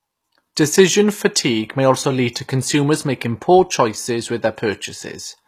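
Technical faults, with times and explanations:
Throughout: HE-AAC compression. The upper spectrum of the speech sounds synthesized rather than captured: s and similar sibilants come out gritty and lispy, with a metallic sheen, and the damage is plainly audible across the clip. This is likely HE-AAC at a low rate, consistent with roughly 24 kbps, where only the lower band is coded and the treble is rebuilt by copying lower bands upward under a coarse envelope, so harmonics fail to line up above the crossover.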